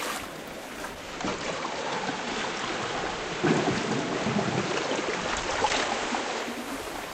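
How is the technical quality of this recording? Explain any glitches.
The recording has one fault: digital radio blending to analogue, from 0.87 s to 6.72 s. The receiver lost its digital signal, cross-faded over about 0.38 s to the station's FM analogue broadcast, and then blended back to digital near the end. During the FM stretch the level shifts by about 3 dB, and a hiss sits roughly 30 dB below the sound. The hiss fades in and out over the same short cross-fades at each boundary.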